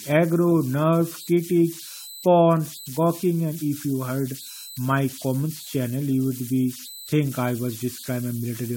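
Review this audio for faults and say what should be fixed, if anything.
Converter idle tones run through the whole speech clip: a whistle around 4 kHz sits in the pauses and turns to grainy noise under quiet passages, about 19 dB below the signal. An undithered delta-sigma converter settles into repeating bit patterns at low input levels. Adding dither ahead of the modulator and removing DC offset at the converter input would prevent this.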